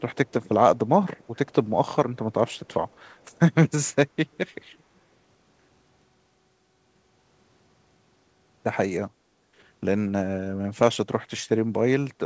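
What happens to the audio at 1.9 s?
Nothing goes wrong at 1.9 s: the speech passes through intact, with only the steady band limit of a wideband call codec, with no content above about 8 kHz, which fits G.722 at 64 kbps.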